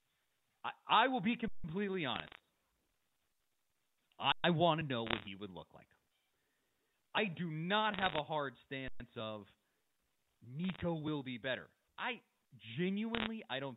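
At 1.48 s there's an underrun with held sample. The output buffer runs dry and the converter just sits on its last value for 160 ms. The waveform goes flat and the sound stops, then resumes exactly where it left off, so the edges are soft rather than clicky. From 2.16 to 2.40 s come bit errors on a digital phone line. Around half a percent of bits in the G.711 A-law stream get flipped, each one corrupting a single sample, so you hear a burst of sharp ticks and crackle laid over the speech. The same flat hold returns at 3.32 s for 80 ms and at 4.32 s for 120 ms. Crackle shows up again from 5.07 to 5.27 s and from 7.94 to 8.19 s, at rates of roughly 0.7 and 0.5 percent. Another 120 ms freeze lands at 8.88 s. The last ticking bursts run from 10.64 to 10.81 s and from 13.15 to 13.27 s. Throughout, the telephone coding itself holds everything below 4 kHz.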